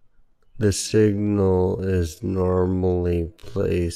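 A short speech clip where, from about 0.8 s right through to the end, the pace suddenly drops to half speed while the pitch holds steady. It's a time-stretched section, likely software padding it out by repeating tiny slices.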